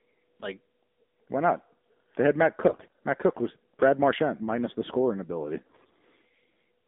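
AMR narrowband mobile codec damage runs through the whole speech clip. The line is limited to roughly 200 Hz to 3.7 kHz, and the coarse vocal-tract modelling leaves the voice plainly buzzy and synthetic. That level of damage fits a low AMR-NB rate of around 7.4 kbps. AMR bit errors hit from 2.68 to 2.92 s and again from 5.66 to 5.93 s. In those spans the voice keeps its pitch and level but turns hoarse, scratchy and gargly. Corrupted low-priority bits are misplacing the excitation pulses and skewing the finer pitch, gain and spectral values. The first burst has the heavier share of flipped bits, roughly 15% against 10%.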